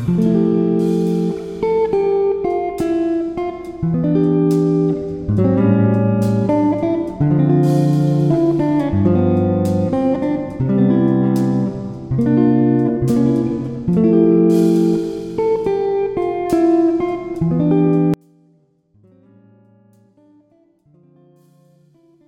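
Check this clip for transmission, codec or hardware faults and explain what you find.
One fault appears. From 18.14 s to the end, the sound drops by about 36 dB to a faint residue. The likely cause is one channel inverted, so shared content cancels when summed to mono.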